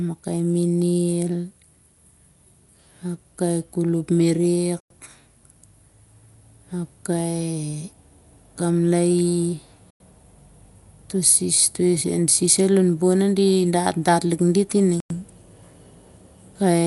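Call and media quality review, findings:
Dolby Digital compression, likely cause, whole clip: encoder starved of bits, band cut with nothing above 11.5 kHz, many frequency lines left without mantissa data and refilled with decoder noise. Damage fits roughly a 64 kbps AC-3 stream. Result: dull, muffled speech with a rough, fluttering grain wrapped around voiced tones, plainly audible throughout.

Gap between chunks, at 4.80, 9.90 and 15.00 s: chunked delivery or playback inserting 100 ms of silence at each join, spaced every 5 s, pointing to codec padding or a player starting each chunk late. No audio lost, but speech is cut by holes at a regular interval, each one a dropout and restart.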